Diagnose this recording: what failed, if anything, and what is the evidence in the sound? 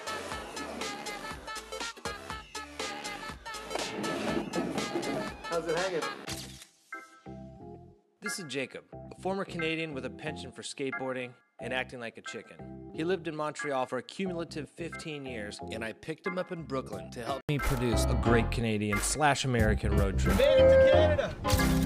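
Input likely switched to a poorer device at the driver: until 17.49 s the sound is dull, cut above 12.1 kHz and quieter, then clears after an 80 ms gap.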